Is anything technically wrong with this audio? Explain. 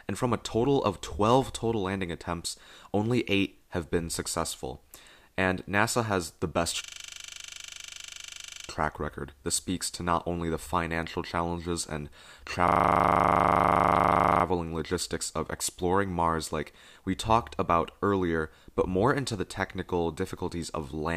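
Yes: a system hang loop at 6.84–8.68 s, after "has the best", and at 12.68–14.44 s, after "the financial challenges and". A frozen system left the hardware replaying one 40 ms buffer, producing a rigid 25 Hz buzz. Unlike a dropout, speech resumes at "track record" and "logistics of exploring" with nothing missing.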